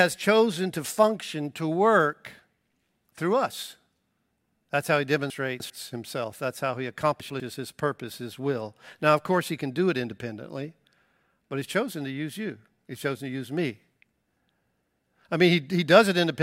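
At 5.3 to 5.7 s, just after "how he", the speech turns briefly jumbled. The cause is chunks out of order: a 100 ms chunk plays three chunks late, so nothing is lost but the sequence is scrambled and three hard joins result. At 7.2 to 7.4 s, again after "how he" and before "his purpose his will", the same happens over a shorter span, with one 100 ms chunk late by one.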